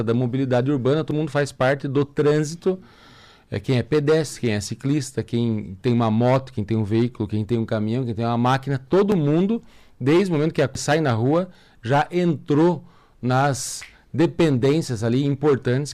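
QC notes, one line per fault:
1.11 s and 10.75 s, dropped buffer (overrun): the audio jumps ahead at each point, with no gap or silence, just a hard splice. The first skip loses roughly a tenth of a second. The one at 10.75 s is bigger, about a third of a second. The likely cause is the capture side not reading its buffers in time, so a chunk was overwritten and the two ends were butted together.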